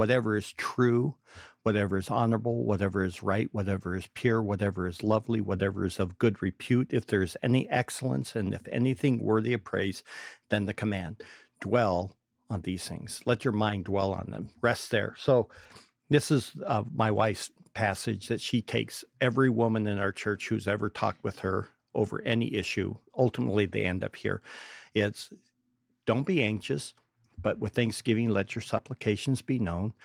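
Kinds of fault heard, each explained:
Short concealed packet loss: Near the end, at about 28.77 s, just after "with thanksgiving let your", a tiny piece of the speech arrived too late to be decoded. The receiver covered the gap by extending the preceding sound for roughly 13 ms. It then blended back into the real signal. About 20 ms of the original audio is gone. It comes across as a brief smear or wobble, and a short consonant there could be lost.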